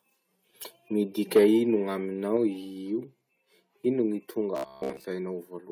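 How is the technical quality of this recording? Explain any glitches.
The recording has a few clear glitches, all in the speech:

From 1.36 to 1.45 s there's microphone overload. Peaks run about 5 dB past the converter's limit, likely from input gain set too high, so around a tenth of samples get flattened into harsh crackle.

The microphone volume stepped down three times: at 1.37 s by about 2 dB, 2.37 s by about 3 dB, and 4.41 s by about 2 dB. Likely automatic gain control is reacting to loudness, so voice and background drop together abruptly.

From 4.57 to 5.06 s you get robotic sound from repeated short buffers. Most of the audio there is replayed snippets, likely because data arrives too late, and that imposes a rigid metallic 66.7 Hz buzz, which fits a 15 ms buffer.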